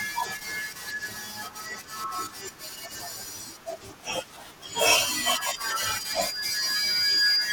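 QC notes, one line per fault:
4.91 s to the end: loudspeaker feedback squeal. A thin, piercing tone near 4.8 kHz emerges under the speech and swells for roughly two seconds until it towers over it, ending around 10 dB louder than the speech itself. The microphone is hearing the loudspeaker it drives, and at that one frequency the round trip adds gain, so the tone keeps feeding itself and climbing rather than dying away.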